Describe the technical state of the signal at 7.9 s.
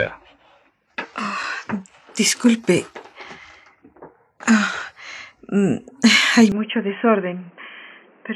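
At 7.9 s the audio sits inside a narrowband stretch running from 6.52 s to the end: nothing above 3.2 kHz, level down by roughly 10 dB, and a new noise floor about 30 dB below the signal, arriving with no gap. The likely cause is an input switched to a poorer device mid-recording.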